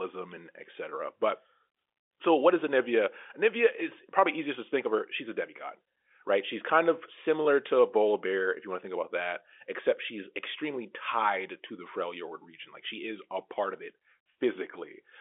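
No technical faults can be heard in this speech recording. It comes through a G.711 telephone coding path, so the sound sits in the narrow line band of roughly 300 Hz to 3.5 kHz, with nothing above about 3.7 kHz.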